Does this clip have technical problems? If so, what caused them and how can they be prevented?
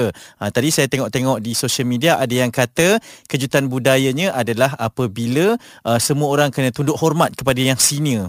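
No, nothing stood out as a technical problem on listening to this speech clip, so there is nothing here that needs preventing.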